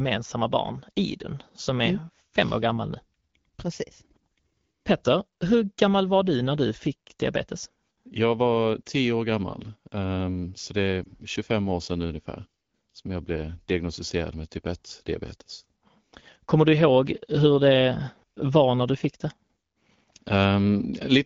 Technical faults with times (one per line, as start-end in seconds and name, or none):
11.04-11.13 lost AMR speech frames